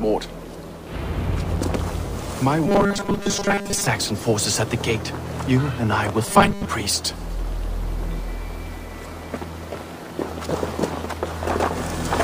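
From 2.67 to 3.87 s, and again briefly from 6.25 to 6.66 s, the sound turns into a rigid, metallic buzz pitched at 200 Hz, its rough outline still tracking underneath. This is robotic sound from repeated short buffers. Fresh audio likely arrived too seldom, so playback kept looping the last fragment while most of the real signal was skipped. The fixed 200 Hz tone fits a repeated 5 ms buffer.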